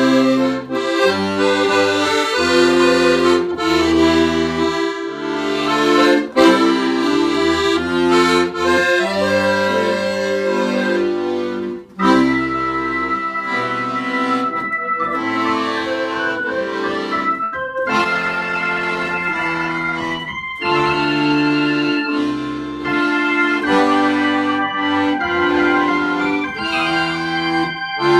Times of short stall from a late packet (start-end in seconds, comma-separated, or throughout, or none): 17.43-17.55